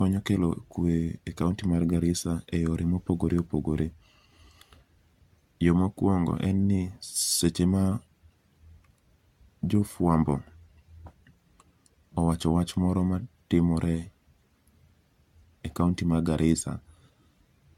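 Across the whole speech recording, the signal has likely been run through repeated lossy encoding, decoded and re-encoded something like seven times, a pattern that fits an AAC-LC chain at around 96 kbit/s. That is generation loss: each pass requantises on a shifted frame grid, so the errors stack up. The result sounds swirly and hollow, worse than a single encode at that rate would, with smeared, softened attacks and patchy gaps in the spectrum.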